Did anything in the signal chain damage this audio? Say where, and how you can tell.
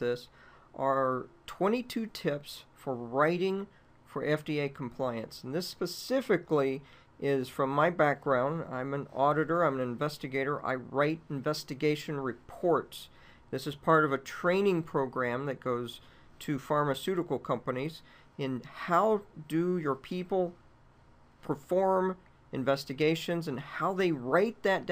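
No, nothing along the signal chain has left an audible mark on this audio. From the first moment to the last, no stage from capture through to playback shows any sign of having damaged the sound.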